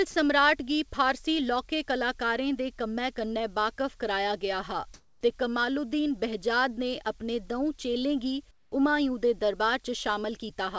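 At 0.11 s, a 30 ms stretch of speech is replaced by flat hiss. This is sound dropped by the voice detector, likely because the sender judged that sound to be background. Unlike packet-loss concealment, nothing is smeared or repeated; the speech is simply missing.

From 4.94 to 5.21 s, comfort noise replaces the background. The real room tone, about 33 dB below the loudest speech, becomes steady, featureless noise about 6 dB louder. The jump in level and the loss of texture set it apart from a noise gate, which would leave near silence. From 8.51 to 8.72 s it happens again, with the background about 28 dB down and the substituted noise about 12 dB quieter. Both pauses were likely filled by the receiver during discontinuous transmission. Throughout, the G.722 call path leaves nothing above 8 kHz.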